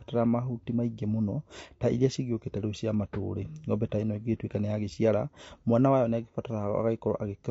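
Right from the start and all the way through, the speech has a rough, grainy edge, with a hiss filling the gaps between the harmonics and a top end that sounds thin and a bit synthetic. That's likely low-delay AAC compression, the AAC-ELD kind used in video calls. Its short frames can't pin down the pitch harmonics cleanly, and the damage is plain enough to fit a bitrate of about 32 kbps.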